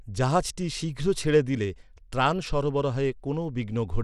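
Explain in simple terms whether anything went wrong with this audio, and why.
Something did go wrong: the whole speech clip sounds gritty, and the treble is gone above about 14.5 kHz. That points to Bluetooth SBC compression, likely from a wireless link that squeezed the sound into too few bits, starving the top end.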